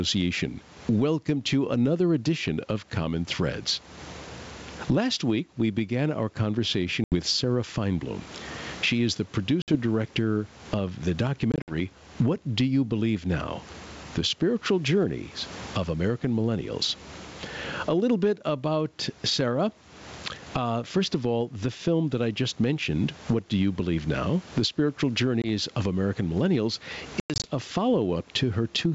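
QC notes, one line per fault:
throughout: gain pumping. The background swells by roughly 25 dB in gaps and ducks under each loud syllable, likely from a fast limiter on excessive gain. The waveform envelope looks flattened, with noise-floor bands rising between phrases.
7.04–7.14, 9.62–9.72 (between "is the" and "director of the"), 11.52–11.75 (after "director of the"), 25.42–25.47, 27.20–27.47: packet loss on an ADPCM call. Losses are 80, 60, 100 (scattered over 160 ms), 20 and 160 ms (scattered over 240 ms). Each appears as a hard-edged blank column in the spectrogram. Speech resumes slightly distorted while the decoder's predictor and step size resynchronise.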